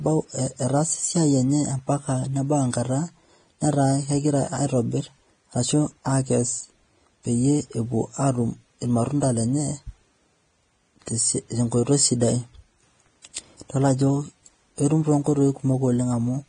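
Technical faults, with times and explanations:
Throughout, Vorbis compression: the speech sounds hissy and grainy, with roughened tones and smeared consonant onsets, and nothing is present above 9.7 kHz. The likely cause is heavy Vorbis encoding at a bitrate consistent with roughly 23 kbps, where the encoder cuts the top band and quantises the upper residue so coarsely that fine detail turns into noise-like texture. On a spectrogram, a hard ceiling at 9.7 kHz sits above blotchy, patchy treble.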